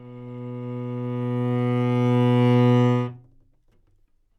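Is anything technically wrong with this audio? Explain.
No, the recording of sounds shows no technical faults anywhere in the signal.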